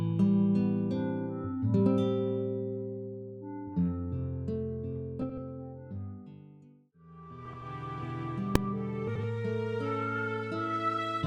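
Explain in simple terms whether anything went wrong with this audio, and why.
Three short stretches are scrambled by frames out of order, at 5.22 to 5.38 s, 7.45 to 7.62 s and 9.07 to 9.24 s. In each, two neighbouring chunks of about 80 ms arrived swapped and were played back that way. That fits four frames per chunk. The sound turns into a brief garbled flutter. Nothing is missing. The order is just wrong.

At 8.55 s there is a single very loud bang. This is invalid numbers at full scale. A calculation broke and produced impossible values. The system pushed them to the loudest level it can output. That block lasts only about 1.5 ms, so there is no gap, just one sharp crack.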